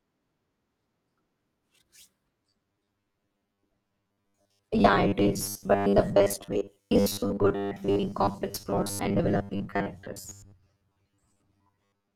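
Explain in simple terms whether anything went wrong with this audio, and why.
From 2.43 s to 12.15 s, the speech becomes a stiff, metallic 100 Hz buzz that only loosely follows the words. This robotic sound from repeated short buffers likely comes from audio arriving too slowly, so roughly half the time the last 10 ms gets repeated.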